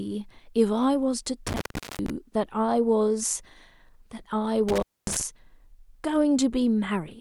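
A loose cable or plug breaks the signal path twice, an intermittent contact fault. The first runs from 1.47 to 2.10 s, with the line open for about 0.41 s. The second runs from 4.69 to 5.21 s, open for about 0.25 s. Each time the speech drops out abruptly, with crackle as the contact scrapes open and closed, and faint hiss remains while the connection is broken.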